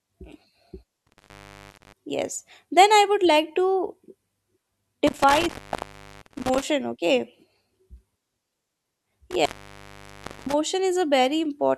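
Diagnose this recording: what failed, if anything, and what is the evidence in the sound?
An intermittent contact in the analogue wiring, a loose cable or plug, opened three times, cutting the speech with crackle at the edges and faint hiss between: 1.07–1.93 s (before "yes then"), 5.07–6.62 s and 9.31–10.54 s, open for 0.41, 0.73 and 1.01 s.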